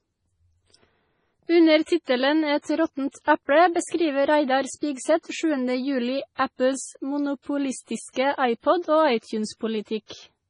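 Throughout the speech, the audio sounds watery and swirly, with nothing above 10.5 kHz and a hard treble ceiling, pointing to heavy MP3 compression, likely at a low bitrate near 24 kbps. Unlike a plain low-pass filter, weak frequency components flicker on and off between frames, leaving metallic chirps on s sounds.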